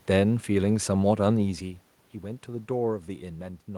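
No technical fault can be heard in the signal; the background noise belongs to the room itself, and the change in level around 1.5 s is the talker shifting position relative to the microphone rather than anything in the system.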